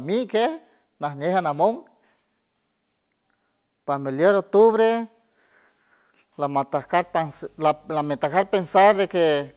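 From 6.76 s to the end, a 50 Hz buzz topped with gritty hash sits roughly 35 dB under the speech, with a thin whine at 15.6 kHz. This is video or display buzz, a screen or video cable coupling its field and line rates into the audio.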